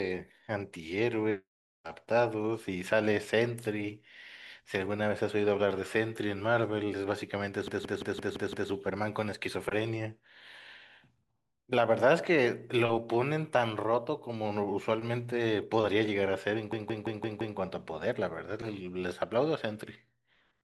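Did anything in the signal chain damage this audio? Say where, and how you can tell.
Yes: a system hang loop in driver buffer replays one 171 ms chunk as a 5.9 Hz machine-gun stutter at 7.68–8.70 s and 16.73–17.58 s.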